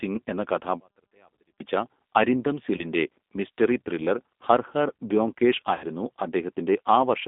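Speech runs through the whole clip with the rough, slightly synthetic timbre of the G.729 codec. The band stops at about 200 Hz and 3.6 kHz, and that damage is plainly audible. The steady, frame-like grit sets it apart from ordinary low-bitrate MP3 smearing and fits an 8 kbit/s G.729A line. From 0.80 to 1.60 s the speech nearly disappears, dropping about 37 dB to a faint residue. The likely cause is one channel inverted, so the centred speech cancels in a mono sum. Because a faint trace of the sound remains instead of true silence, this differs from a dropout or mute. At 2.77 to 2.84 s and again at 5.75 to 5.85 s, VoIP packet loss concealed by the speech codec turns the speech into a stretched sound that fades, and the speech then stays weak briefly after it returns. The gaps last about 20 ms and 60 ms, which points to one and then roughly three lost packets. That gradual decay distinguishes concealment from a hard cut or click.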